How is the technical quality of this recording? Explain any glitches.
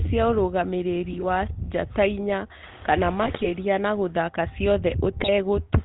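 The technical quality is poor. The speech is coded through a narrowband phone codec throughout, and three short bursts of corruption break it up.

The GSM full-rate codec colours the whole clip. It rebuilds speech from a vocal-tract filter driven by coarse, regularly spaced pulses. Nothing above 4 kHz survives. The result is a plainly buzzy, gravelly roughness, which fits 13 kbps GSM.

GSM bit errors strike at 1.12 to 1.25 s, 3.23 to 3.52 s and 5.17 to 5.29 s. Corrupted filter, pitch or gain values reach the decoder and distort each frame. The speech squawks, pops and gargles. The middle burst is longest.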